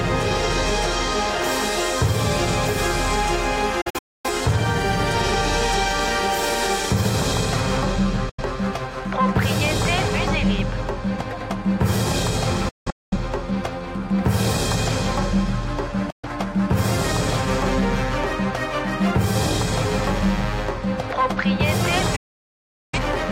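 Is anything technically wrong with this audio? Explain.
Yes. The audio has five digital broadcast dropouts. They fall at 3.81 to 4.30 s, 8.29 to 8.42 s, 12.69 to 13.17 s, 16.10 to 16.29 s, and 22.16 to 22.99 s. The receiver loses good frames and mutes until valid ones return. Each mute fades in about 8 ms, so the sound drops out abruptly. The first and third are broken into several short holes. The last is a solid silence of about 0.77 s. Whatever was broadcast in those gaps is gone.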